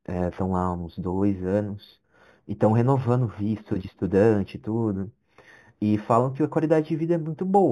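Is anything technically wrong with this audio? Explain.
Yes. Throughout the speech there is imaging from linear upsampling. Straight-line interpolation from what sounds like an 8 kHz source leaves a faint mirrored image at 4–8 kHz, roughly 40 dB down, heard as metallic shimmer on sibilants.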